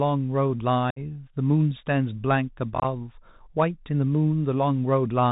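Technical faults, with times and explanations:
Throughout: Bluetooth CVSD headset codec. The speech passes through the narrowband headset codec at 64 kbps, one bit per sample. Nothing above 4 kHz survives. Fast, loud high sounds outrun the adapting step size and distort, s sounds turn scratchy, and a granular hiss sits underneath.
0.90 to 0.99 s: unconcealed Bluetooth headset packet loss. About 60 ms of speech is gone, roughly seven short packets. Silence or an idle pattern fills the hole, with abrupt edges. The speech returns briefly quieter as the codec's step size rebuilds.
2.74 to 2.85 s: unconcealed Bluetooth headset packet loss. About 52.5 ms is lost, scattered across 105 ms, with the longest gap 22.5 ms. Roughly seven packets drop out. The scattered holes make the speech sound chopped and crackly.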